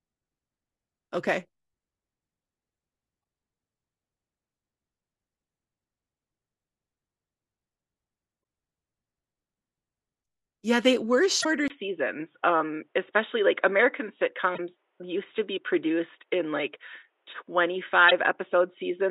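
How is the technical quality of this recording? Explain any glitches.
The recording has two kinds of problem: three brief decoding glitches and a lasting drop in quality from 11.68 s to the end.

Damaged data in a compressed stream, at 11.40–11.46 s, 14.54–14.60 s and 18.07–18.12 s: corrupted frames make the decoder lose sync, producing short glitches, unlike a change of microphone.

From 11.68 s, after a 20 ms gap, the sound turns dull and boxy with nothing above 3.8 kHz, a level shift of roughly 5 dB and new background noise some 50 dB down. The likely cause is the input switching to a poorer device. Unlike the glitches, it persists.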